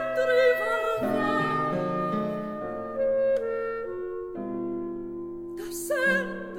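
Music, with no audible faults.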